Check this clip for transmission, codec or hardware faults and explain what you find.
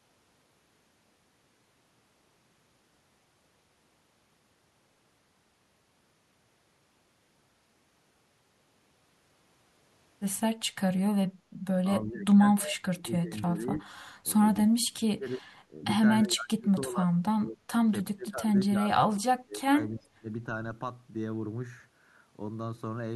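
Two faults appear in the second half of this speech clip, both tied to the two call ends talking over each other.

Speech suppressed in double talk occurs at 11.86–13.88, 14.23–14.28, 14.67–15.83, 16.23–17.14, 17.32–17.72 and 18.13–20.29 s. The echo canceller likely could not tell the near talker from loudspeaker echo, so it attenuated everything. The voice sinks by around 30 dB or more, nearly vanishing, except for the brief 14.23 s dip of around 10 dB. Unlike packet loss, the cuts are gain reductions that follow the overlap rather than clean dropouts.

Echo leak appears at 12.68–12.72 s, inside the first suppressed stretch. Residual loudspeaker pickup was likely sent back uncancelled, producing a faint scrap of the voice trailing by 310 ms and roughly 15 dB below the speech. The fixed delay marks it as returned echo rather than room reverberation, which would smear continuously instead of repeating the sound as a separate copy.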